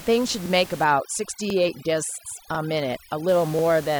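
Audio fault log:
0.84–3.28 s, overdone noise removal: From just under a second in, the background drops and breaks up into little twinkling specks. A noise reducer set way too hard is clamping individual frequency bands down whenever they sit close to its idea of the noise, and the quieter parts of the speech get pulled under with them. Outside this stretch you can hear the room noise sitting about 18 dB below the speech.
1.50–1.55 s and 2.55–2.59 s, overlapping chunks: At each of these two spots there's a quick stutter, where a 44 ms slice of audio plays twice. The audio is being handled in 1-second chunks, and each new chunk starts 44 ms before the previous one finished, so the tail of one gets repeated at the head of the next. That's why the hiccups land about a second apart, right at the chunk joins.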